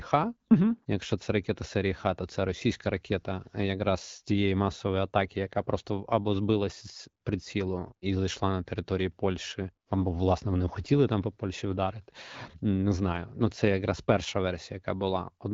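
Nothing stood out on listening to this speech, which comes through the AMR wideband (HD Voice) codec at 12.65 kbit/s with only the light coding character expected at that rate.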